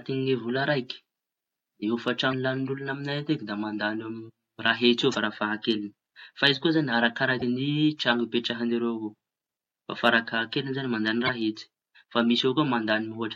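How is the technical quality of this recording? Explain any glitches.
The speech is interrupted four times by damaged data in a compressed stream, at 2.29–2.33 s, 5.11–5.15 s, 7.38–7.43 s and 11.26–11.29 s, the last just after "farafahakeliñy zañy mandañy". Each lasts about 40 ms. Corrupted bytes make the decoder misread frames and lose sync until it finds the next frame header. Each event is heard as a brief chirp or blip.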